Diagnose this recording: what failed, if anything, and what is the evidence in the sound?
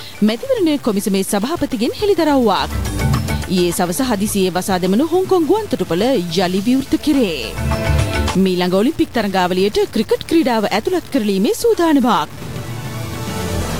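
The sound is grainy throughout, with a rough, gritty distortion that rises and falls with the signal and sits only about 25 dB below it. This is low bit depth without dither, most likely from a sample-format conversion that truncated the audio to about 6 bits. Broadband hiss would stay steady through quiet stretches. Here the error tracks the signal, because truncation without dither makes the rounding error follow the waveform itself.

A single loud pop is heard from 2.20 to 2.22 s, peaking a few decibels above the surrounding level, and the sound carries on unbroken underneath. That continuity separates it from a dropout or buffer glitch, where audio would be lost or repeated. A voltage step added to the signal, likely from a plug, switch or static discharge in the analogue wiring, fits a brief pulse shaped by the circuitry that follows it.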